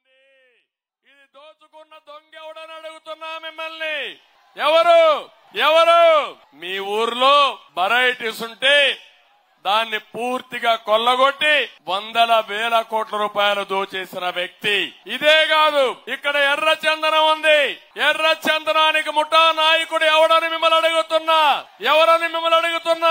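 No technical faults can be heard in this audio. It opens with a smooth fade-in from silence that reaches full level at about 4.88 s, with no click or hard edge.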